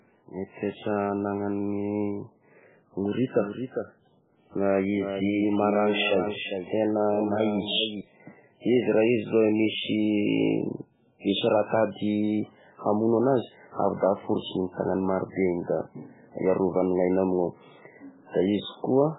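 From the first second to the end, the speech carries heavy damage that is likely MP3 compression at a very low bitrate, around 8 kbps. Nothing sounds above 3.8 kHz, so the treble is gone and the sound is watery and swirly as weak frequency lines drop in and out between frames. On a spectrogram this shows as a flat ceiling at 3.8 kHz, with the content below broken into flickering, patchy blocks rather than smooth harmonics.

Between 3.37 and 8.01 s, a doubled audio track appears, likely from a second copy of the same sound mixed in out of step. It trails the original by roughly 0.4 s and is about 10 dB quieter, and it starts and stops abruptly with no decay or room colour. It sounds like a clean, quieter echo of each syllable. On the waveform, each burst has a smaller twin about 0.4 s later, and the spectrogram shows those shapes repeated, offset in time.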